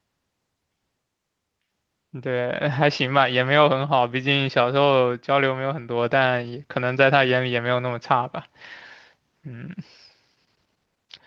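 No technical faults can be heard in this recording.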